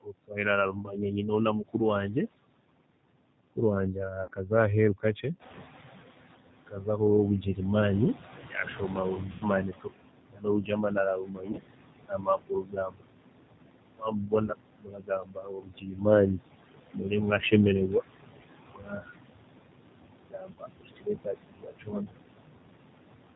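A G.729 speech codec carries the whole clip, which fits its 8 kbit/s rate. The speech is rebuilt from a vocal tract filter, a pitch predictor and a few pulses per frame rather than sent as a waveform. The result is plainly rough and slightly synthetic throughout. The band stops at 4 kHz, so sibilants lose their edge, and the leftover background warbles instead of hissing evenly.

Running alongside that for the full length are noise suppressor artifacts. The suppressor pulls down whatever bands it judges to be steady noise, by about 21 dB. It does this frame by frame, so the background drops away in the gaps and swells back up under the speech.

The suppressor also cuts speech, mistaking parts of it for noise. This happens from 0.01 to 2.16 s, 3.56 to 5.24 s, 6.67 to 13.04 s, 13.97 to 17.52 s, 18.73 to 19.08 s and 20.29 to 22.12 s. Soft consonants, word endings and quieter stretches are turned down with the background, by up to about 22 dB. 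Those syllables sound swallowed or faint, most extensively in the long 6.67 to 13.04 s stretch.

Packet loss concealed by the speech codec interrupts the audio at:
1.62 s
4.23 to 4.31 s, scattered, with the longest gap 50 ms
9.32 to 9.50 s, 90 ms lost
11.46 to 11.60 s, scattered
14.46 to 14.50 s
20.54 to 20.58 s

At each one the decoder had no data and extended its last pitch and filter, lowering the gain. The sound smears into a buzzy tone or coloured noise that fades. Because each frame depends on the previous one, the voice stays weak or distorted briefly after the gap.

At around 5.5 s the room noise jumps by about 11 dB, and the noise suppressor is caught catching up. Its noise estimate lags behind the new level, so from 5.39 to 6.31 s the louder background comes through with less reduction. Over those 920 ms it is gradually pressed back down, by about 18 dB once the estimate settles. 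This is heard as a surge of noise that sinks away.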